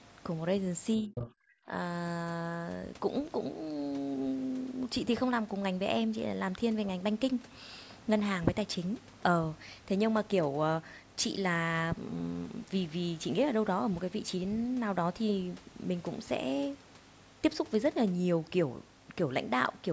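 Speech suppressed in double talk hits first from 1.0 to 1.15 s, where the talker's voice sinks by something like 20 dB. Both ends were likely talking at once, and the echo canceller, unable to tell its own talker from the loudspeaker echo, turned everything down.

The other side's voice leaking through follows from 1.15 to 1.3 s: a second voice, only a few dB below the talker, comes through the microphone because the echo canceller likely failed to remove all of the loudspeaker playback.

Speech suppressed in double talk returns from 1.35 to 1.7 s and is harsher, with the talker dropping by roughly 40 dB, close to cutting out, likely for the same reason of overlapping talk. The call's microphone processing, with nothing above 8 kHz, sits under all of this.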